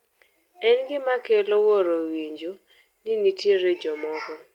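Speech clip, and the one thing to flag is a lost packet rebuilt from error correction, from 3.33 to 3.51 s. There's no dropout, but that stretch turns rougher and noisier for a moment. That's the decoder filling in missing packets with the low-bitrate backup copies that ride along in the following packets. The repaired chunk adds up to about 100 ms, which fits roughly five lost 20 ms packets.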